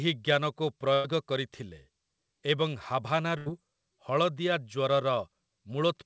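Speech clip with two bursts of packet loss, at 0.94–1.06 s and 3.38–3.48 s, each replacing about 100 ms and 80 ms of audio with concealment: the last sound is held and faded as a buzz or hiss, then speech resumes with that stretch missing. Band-limited to 8 kHz, consistent with a wideband call codec.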